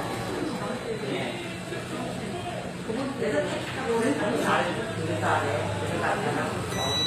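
Sounds throughout, with plainly audible HE-AAC compression from start to finish. Nothing sits above 14.9 kHz, yet the treble below that stays bright but grainy and metallic, likely rebuilt by band replication rather than dulled as a simple low-pass would leave it, which fits a low bitrate around 24 kbps.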